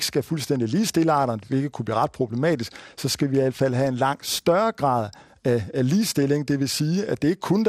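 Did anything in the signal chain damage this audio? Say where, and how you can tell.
Yes, at the codec stage, throughout. The speech sounds dull, with gurgling, granular distortion. That is likely MP2 compression starving its upper sub-bands, which fits roughly 80 kbps.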